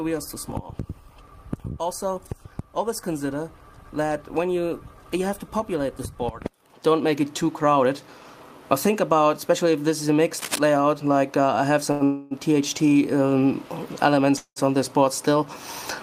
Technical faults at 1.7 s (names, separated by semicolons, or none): none